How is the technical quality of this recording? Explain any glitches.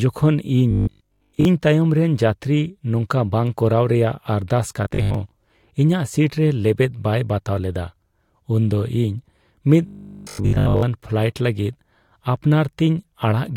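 The recording has three passages of robotic sound from repeated short buffers: 0.71–1.45 s, just before "ᱤᱧ ᱛᱟᱭᱚᱢ ᱨᱮᱱ ᱡᱟᱹᱛᱨᱤ"; 4.85–5.15 s, right after "ᱵᱟᱝ ᱠᱚᱨᱟᱣ ᱨᱮᱭᱟᱜ ᱟᱨᱫᱟᱥ"; and 9.87–10.83 s, before "ᱯᱷᱞᱟᱭᱤᱴ ᱞᱟᱹᱜᱤᱫ". The likely cause is audio arriving late, with playback looping the last 20 ms chunk while fresh audio is dropped. That loop imposes a rigid 50 Hz metallic buzz. It affects most of the first passage, about half the second and all of the third. A spectrogram would show stiff horizontal harmonics at 50 Hz spacing, and the waveform would show identical 20 ms cycles.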